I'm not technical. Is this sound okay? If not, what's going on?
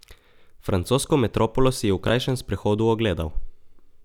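No. At about 2.08 to 2.10 s, just after "metropolo si je v", there's a brief jumbled stutter. This is chunks out of order: a tiny piece of sound, about 11 ms long, played one slot late, so the sequence briefly scrambles.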